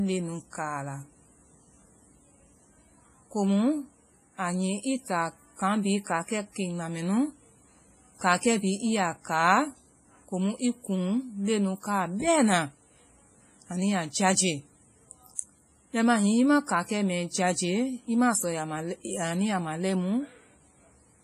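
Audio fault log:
throughout WMA compression: the speech sounds ringing and washy, with a hiss that swells and fades with each phrase and smeared, pre-echoed consonants, likely from low-bitrate transform coding around 24 kbps; a spectrogram shows a hard ceiling near 15.4 kHz and patchy, blocky gaps where weak detail vanished.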